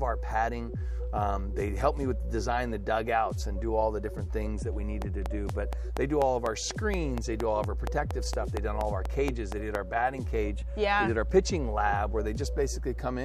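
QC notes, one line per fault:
5.02–9.76 s, train of clicks: a steady ticking at about 4.2 clicks per second, roughly twenty sharp pulses of near-identical shape, jumping well above the programme (on the order of 15 dB). They continue straight through quiet passages, so they sit on top of the sound rather than coming from it. The even spacing and matching shape set this apart from random crackle or dropout gaps, and point to likely interference from nearby equipment or a faulty connection or power supply.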